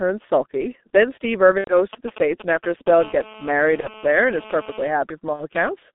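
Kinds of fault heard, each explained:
G.723.1 codec: throughout, this low-rate telephony coder at 6.3 kbit/s confines speech to roughly 200 Hz–3.6 kHz, leaving it heavily muffled, hoarse and smeared.
VoIP packet loss concealed by the speech codec: at 1.58–1.75 s, 3.80–3.89 s and 5.33–5.45 s, lost frames are filled by extrapolating pitch and filter, giving fading stretches.
GSM signalling bursts: from 1.93 to 2.89 s, a nearby 2G phone's short radio bursts are rectified, producing galloping ticks and brief 217 Hz buzzes about 10 dB below speech.
GSM phone buzz: from 2.99 to 4.91 s, a steady, raspy 217 Hz buzz rich in harmonics sits about 19 dB down, from a nearby phone transmitting during a call.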